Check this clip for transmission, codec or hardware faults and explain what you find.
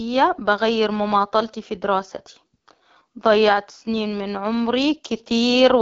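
One fault runs through the whole clip: AMR wideband (HD Voice) codec damage. From start to finish the speech sounds rough and raspy, with a hissy, synthetic top. The codec models the voice only up to 6.4 kHz and fills the band above with shaped noise. The roughness fits its second-lowest rate, 8.85 kbit/s.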